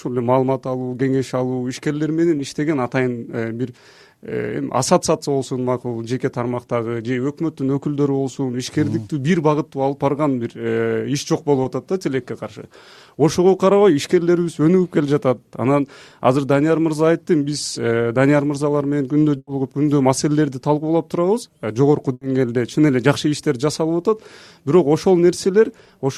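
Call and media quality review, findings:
Brief smear or wobble at 2.37–2.41 s and 11.63–11.67 s. Short concealed packet loss: about 20 ms missing in each, bridged by the receiver extending the preceding sound.

Held buzz or fading hiss at 19.37–19.49 s, ending in about 40 ms of silence, and again at 22.13–22.23 s. Burst of packet loss: about 100 ms and 80 ms dropped, concealed with decaying fill.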